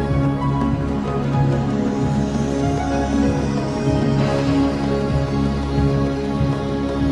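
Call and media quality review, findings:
No faults found; nothing to action on this sample.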